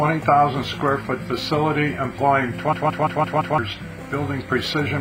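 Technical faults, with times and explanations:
2.73–3.58 s, system hang loop: the sound abruptly locks onto one chunk about 171 ms long and replays it exactly, five times over, at roughly 5.9 repeats a second. That gives a choppy machine-gun stutter rather than a buzz, since the chunk is long. It's what you hear when the machine or driver stalls while the audio hardware keeps cycling its ring buffer; the length fits an 8192-sample buffer. About a second of real audio never makes it out.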